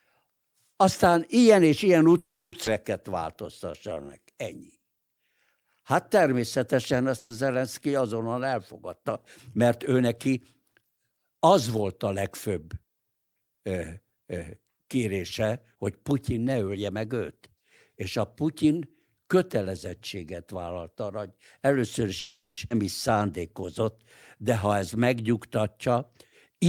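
At 2.17 to 2.54 s there is a call audio freeze, likely from packets held up in transit until the jitter buffer ran dry. The last sound is stretched into a fading buzz or hiss, then about 270 ms of silence, and the speech resumes where it stopped. It adds 350 ms of delay but loses nothing.

Right after "ilyen és ilyen", at 2.64 s, comes a skip ahead. Roughly 200 ms of speech is dropped and the two sides are butted together with almost no gap, which pulls the delay back down.

From 3.10 to 5.09 s a jitter buffer slow-down repeats pitch periods to rebuild reserve. It inserts 230 ms and plays at 89% speed with unchanged pitch, so sounds are drawn out.

At 7.18 to 7.32 s a burst of packet loss leaves a 120 ms hole. It is concealed by continuing the last sound as a decaying buzz or hiss, with no silence, before the speech picks up further on.

Two jitter buffer speed-ups trim pitch periods to shed excess delay. 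The first runs from 8.82 to 11.01 s, just before "az volt a legfőbb", at 107% speed and removes about 150 ms. The second runs from 15.55 to 17.37 s at 110% and removes about 200 ms. Both sound hurried at normal pitch.

After "vállalt arra hogy először", a second call audio freeze runs from 22.19 to 22.59 s. It gives 380 ms of fill, including about 100 ms of silence. A skip ahead at 22.69 s then cuts roughly 300 ms. A short slow-down from 23.13 to 23.67 s adds 62 ms at 90% speed.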